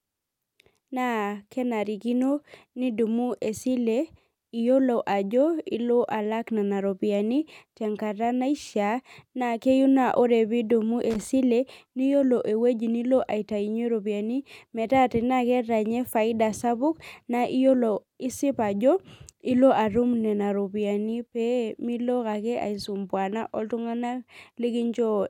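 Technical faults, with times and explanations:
11.10–11.27 s, loose connector crackle: for roughly 170 ms the speech breaks into an irregular burst of scratchy crackle. A worn or dirty contact in the signal path is shifting, so the circuit closes and opens many times in quick succession. Each break chops the waveform abruptly, and each remake produces a click, which together form the ragged, gritty texture rather than a single clean dropout.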